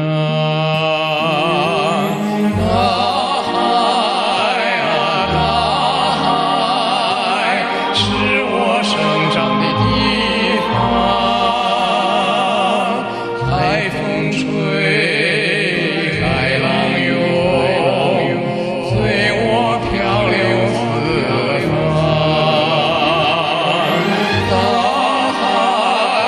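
From 15.76 to 23.24 s a doubled audio track appears: a dry, full-band copy trails about a second and a half behind, roughly 5 dB quieter, likely from a second, slower capture path. On a spectrogram, every pattern repeats shifted right, starting and stopping abruptly.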